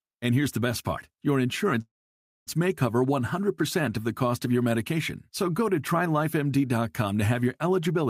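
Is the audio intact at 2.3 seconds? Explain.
No. From 1.81 to 2.49 s the speech halts in a call audio freeze: the last sound carries on briefly as a fading buzz, then drops to silence for about 0.59 s. Packets were likely delayed and the jitter buffer ran dry, so speech resumes where it stopped, shifted about 0.65 s later, with nothing lost.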